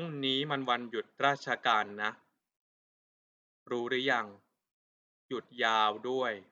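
No dropouts, glitches, clipping or timing faults turn up anywhere in this speech recording.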